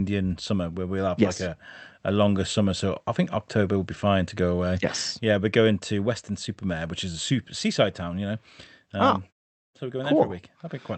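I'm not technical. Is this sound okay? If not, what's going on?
Yes, this speech sounds fine, and nothing stood out as a problem on listening.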